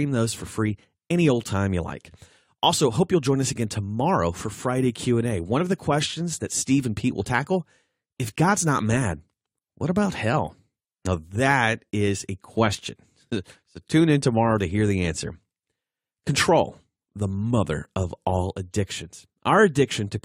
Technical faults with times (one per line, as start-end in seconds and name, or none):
none